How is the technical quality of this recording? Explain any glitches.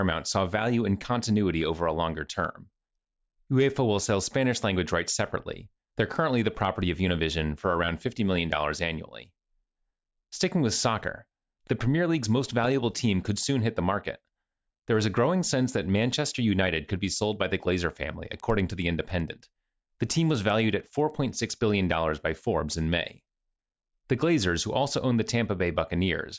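The recording has one glitch, between 18.3 and 21.5 s, where the speech carries a steady ticking. The cause is a resampler restarted on every block. The converter, apparently taking the audio down from 48 kHz to 16 kHz, processed each 100 ms chunk in isolation. At each edge it lacked the real neighbouring samples, leaving a small error at every boundary. That error sounds like regular ticks at 10 per second, riding on the speech and following it.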